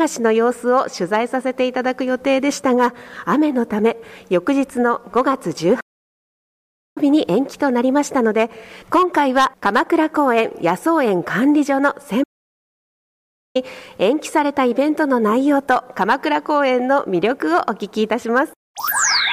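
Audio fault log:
5.80–6.98 s and 12.23–13.56 s, playback stall: sound drops to silence mid-flow for 1.16 s, then 1.32 s, likely the player running out of buffered data.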